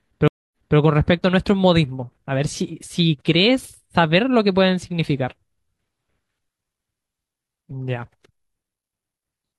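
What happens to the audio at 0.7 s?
At 0.7 s the audio is inside a stream reconnect spanning 0.28 to 0.78 s. The connection dropped, leaving about 0.24 s of silence, then a fresh decoder resumed mid-stream 0.26 s earlier, so a short stretch repeats, entering muted or faded in.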